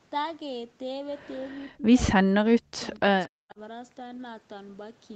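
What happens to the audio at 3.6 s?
From 3.26 to 3.59 s the speech drops deeply, by roughly 40 dB, likely speech suppressed in double talk: the echo canceller mistook overlapping talk for echo. A packet-loss gap would instead sound like concealment.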